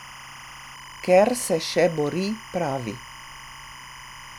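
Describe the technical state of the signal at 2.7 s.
Timecode bleed runs through the whole clip, 2.7 s included. Linear timecode at 25 frames per second leaks in roughly 20 dB below the speech. It sits around 1 and 2 kHz as a chirping, data-like warble, not a steady hum or single tone.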